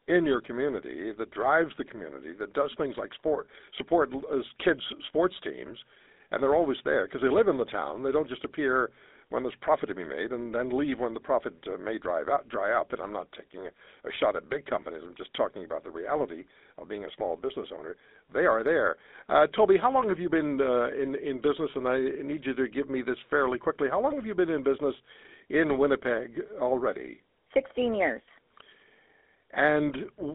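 Throughout the speech, GSM full-rate codec damage is plainly audible. The codec models the vocal tract and excites it with a sparse regular pulse train, producing a buzzy, gravelly roughness. The band runs from 250 Hz to 3.7 kHz, consistent with 13 kbps GSM.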